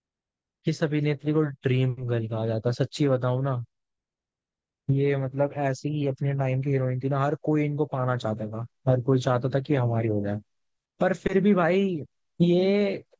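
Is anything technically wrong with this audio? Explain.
No, nothing in this speech clip points to a technical fault. No working path is listed to comment on, so there is nothing further to report.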